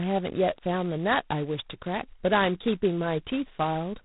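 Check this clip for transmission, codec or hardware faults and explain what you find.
A harsh, rasping hiss rides on the speech for the whole clip, swelling and shrinking with its level, and nothing above about 4 kHz survives. That is G.726 ADPCM at its coarsest, which fits 16 kbit/s: only two bits per sample code the difference from an adaptive prediction, so the quantisation error is large and tracks the signal.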